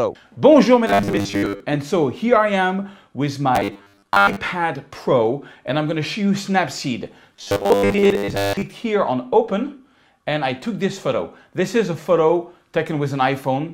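New audio was likely arriving too seldom, so a 10 ms stretch kept being replayed over most of the real material. This causes robotic sound from repeated short buffers at 0.87–1.60 s, 3.55–4.36 s and 7.33–8.62 s: a rigid, metallic 100 Hz buzz loosely tracking the underlying sound.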